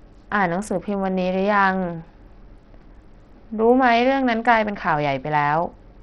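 Bluetooth SBC compression runs through the whole recording, likely from a link sending at a very low bitrate, with artefacts that fit roughly 64 kbps. The speech loses its treble, which thins out and flickers in and out, and a gritty, grainy noise rides on every syllable. These are the heavy artefacts of a starved bit pool: the codec's upper sub-bands get few or no bits and the remaining bands are coarsely quantised, leaving aliasing behind.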